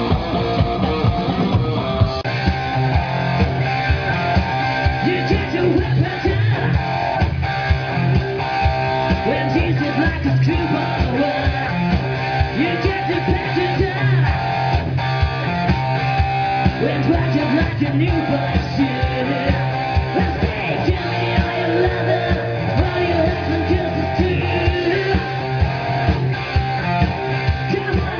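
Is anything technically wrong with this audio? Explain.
No, nothing technically wrong can be heard anywhere in the clip.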